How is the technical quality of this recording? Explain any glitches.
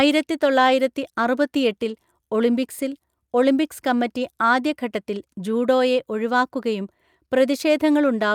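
The technical quality of this recording is sound, with no glitches to explain.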